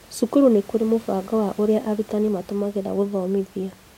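A short speech recording with no technical fault to point to anywhere in it. Some background noise from the room can be heard, sitting about 26 dB below the speech, as part of the recording itself.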